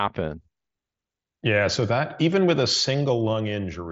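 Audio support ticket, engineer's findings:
Nothing stood out on listening to this speech clip, which carries the band limit of the Bluetooth mSBC headset codec, with nothing above about 7.7 kHz.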